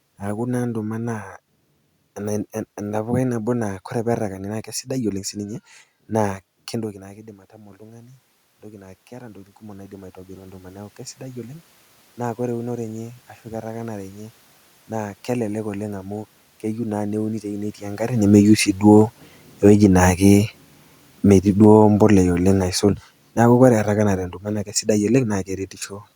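A speech clip with two automatic gain faults. Just after "oleng' sii", at 5.36 s, automatic gain rising begins. The gain control judges the input too quiet and lifts it by about 11 dB. Voice and room noise swell together, slowly, until 22.16 s. The talker's own movements near 6.5 s and 17.5 s sit inside this stretch. Automatic gain falling starts at 18.1 s, overlapping the rise. The control now judges the input too loud. It pulls the level down by about 11 dB. Speech and background sink together until 25.35 s.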